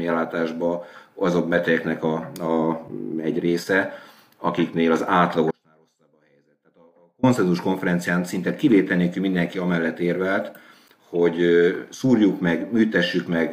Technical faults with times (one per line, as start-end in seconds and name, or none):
5.51-7.23 audio dropout to a faint residue